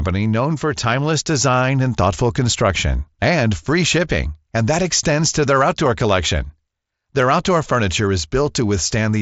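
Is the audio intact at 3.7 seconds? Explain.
Yes, the speech at 3.7 seconds is intact, with no fault at that moment.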